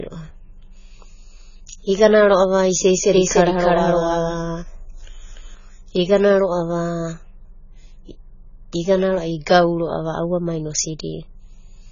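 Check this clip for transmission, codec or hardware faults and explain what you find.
Two faults stand out in this speech clip: heavy lossy coding across the whole recording, and a stretch where the same audio plays twice, out of step.

The AAC compression runs from start to finish. Nothing reaches above 7 kHz, and sibilants come out smeared and fizzy, with a warbling texture on held vowels. The likely cause is AAC-LC at a very low bitrate, roughly 16 kbps. At that rate the coder drops the top band and leaves gaps in the spectrum, so the damage is heavy. A plain low-pass filter would also dull the sound, but it would not add this watery, swirling grain.

The doubled audio track runs from about 3.14 to 5.54 s. A second copy of the speech, at roughly the same level as the first, trails it by around 300 ms. The likely cause is the signal being captured twice, once through a slower path. This differs from room echo or reverb in three ways. 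The copy keeps the full bandwidth, it does not fade or take on any room colour, and it starts and stops abruptly rather than decaying away.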